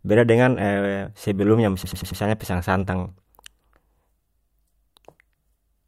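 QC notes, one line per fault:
1.84–2.21 s, repeated frames: one 93 ms compressed block was played four extra times, so the speech stutters and runs 0.37 s longer.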